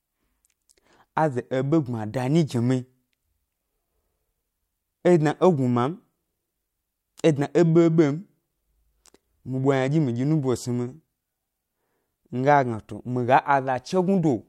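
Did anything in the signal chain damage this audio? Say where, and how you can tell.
No, I can hear no damage anywhere in this chain.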